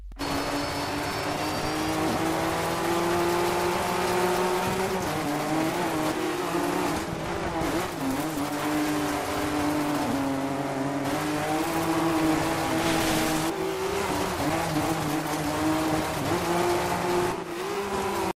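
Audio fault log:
0.12–18.25 s periodic USB or driver dropouts: the bus or driver stalls every 0.125 s, silencing about 2 ms each time, heard as regular ticking.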